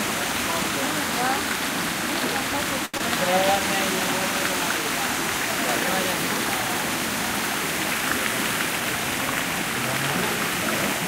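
At 2.85 to 2.96 s the sound hangs for about 83 ms with a faint buzz or dip, then resumes unbroken. This is a short stall from a late packet: the jitter buffer emptied and the last sound was stretched until the data arrived.

At 2.98 to 3.01 s a brief smear of about 17 ms fills in, and about 40 ms of audio is lost. This is short concealed packet loss, where the gap was patched by continuing the preceding sound and blending back in.

From 8.53 to 9.64 s the audio runs about 4% fast at unchanged pitch. This is a jitter buffer speed-up: roughly 50 ms of small slices were trimmed to reduce the excess delay.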